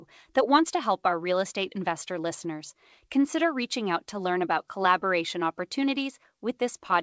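No technical faults are audible.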